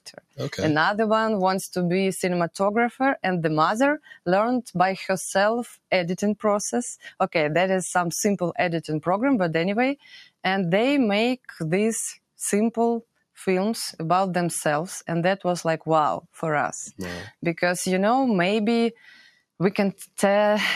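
Throughout, a noise suppressor applied to music or sounds is at work. A processor built for speech treats the steady, sustained parts of the sound as noise and keeps pulling them down, so the level pumps by around 5 dB, with attacks intact and held tones thinning.

Sound cut by the noise suppressor then deepens at 0.01–0.38 s, 3.99–4.27 s, 9.97–10.33 s and 19.25–19.41 s. In each stretch the suppressor mistakes the material for noise and ducks it, by about 18 dB in the first two, about 17 dB in the third and about 11 dB in the last, so sustains sink and decays are cut short.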